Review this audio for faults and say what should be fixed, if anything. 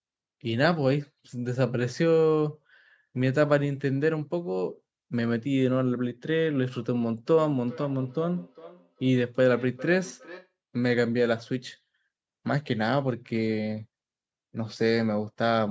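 Between 7.28 and 10.55 s the speech returns as thin, ringing repeats around every 0.4 s, peaking about 18 dB below the voice. This is feedback echo between two devices: a second device plays back the microphone's signal, which is then picked up again, beyond that microphone's own echo canceller. Join the call from only one device per room.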